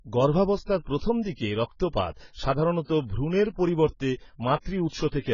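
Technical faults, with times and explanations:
Throughout, AAC compression: the whole clip sounds dull and smeared, with nothing at all above 7 kHz, so the top of the speech is simply gone and sibilants come out fizzy and warbly. That's heavy damage, the kind you get when a transform codec is starved of bits and has to drop the high bands and quantise the rest coarsely. The likely cause is AAC-LC at a low rate, which fits something around 16 kbps.
0.84 to 0.87 s and 0.98 to 1.01 s, pre-echo: two sharp attacks each get a short hiss just ahead of them, spread over about 26 ms and 30 ms, so the onsets sound soft rather than crisp. The codec sizes its quantisation noise for a whole block. When a loud attack lands late in that block, the noise meant for the loud part also fills the quiet stretch before it.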